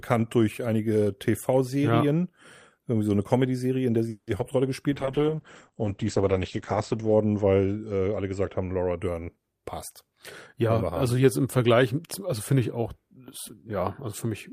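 A German speech recording shows a cluster of call-transport faults between about 4 and 9.3 s. Right after "in der sie", from 4.09 to 4.29 s, there is a call audio freeze. The last sound is stretched into a fading buzz or hiss for about 180 ms, and then the speech resumes exactly where it stopped. The likely cause is delayed packets draining the jitter buffer. Nothing is lost, but everything afterward arrives about 180 ms later. On a spectrogram this looks like a smeared, steadily decaying copy of the preceding spectrum, and the waveform shows a tapering envelope with no true silence. Just after "in der sie die", at 4.37 to 4.41 s, a short concealed packet loss replaces about 20 ms of audio with a continuation of the previous sound. It is heard as a tiny smear or wobble and appears as a brief blurred vertical slice where the harmonics lose their detail. From 4.93 to 9.04 s a call bitrate drop takes the encoder from 32 kbps down to 10 kbps, where it stays for about 2.2 s. 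The audio turns rough and watery, and the coded bandwidth shrinks from 20 kHz to 8 kHz, so the spectrogram shows a hard ceiling at 8 kHz with everything above it empty, plus coarser, blockier texture below. Overlapping the end of that stretch, from 8.97 to 9.29 s, a jitter buffer speed-up plays the speech at about 115% of normal speed with unchanged pitch. It does this by cutting around 50 ms in small pitch-period pieces, which makes the speech sound briefly hurried. In the waveform the syllables look compressed in time, with the pitch periods keeping their normal spacing.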